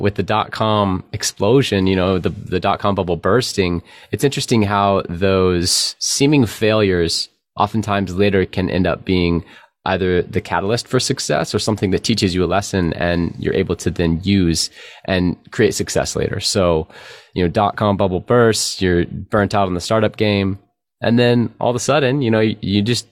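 Nothing in the speech stood out as a technical fault on listening.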